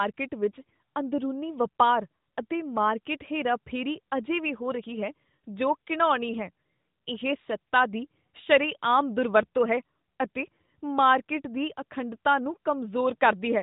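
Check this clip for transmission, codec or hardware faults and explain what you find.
Nothing stood out on listening to this speech clip that would point to a transmission, codec or hardware fault.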